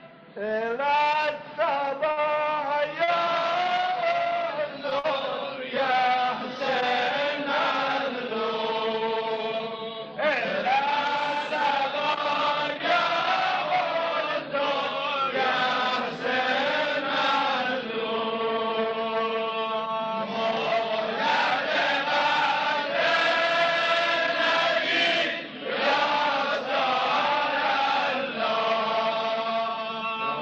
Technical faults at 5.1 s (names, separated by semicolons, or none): short stall from a late packet